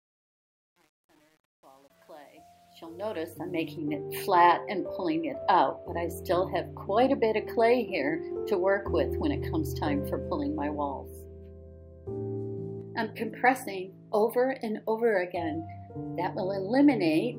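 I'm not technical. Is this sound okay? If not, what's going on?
No. There is truncation distortion on a fade from the start to about 3.77 s, worst from 0.0 to 3.27 s. The sound fades in from roughly the very beginning, but the quiet opening is gritty instead of rising evenly. The volume control behind the fade keeps too few levels of loudness, which fits a 9-bit stage. Very quiet sound gets rounded into a few coarse steps, so it sounds gritty until the fade brings it up to a normal level.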